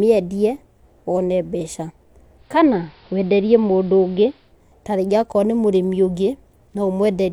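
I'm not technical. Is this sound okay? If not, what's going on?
No. From about 2.36 to 4.54 seconds this speech goes through digital radio blending to analogue: the radio lost its clean digital signal and slid over to the AM broadcast of the same station, then back. Each changeover takes about a quarter of a second. In between, the sound turns muffled, and a faint hiss sits underneath while loudness barely shifts. Unlike a dropout, the sound never stops; it's a smooth swap into a dull, hissy copy.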